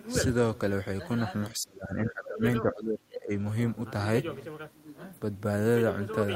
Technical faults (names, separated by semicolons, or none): speech suppressed in double talk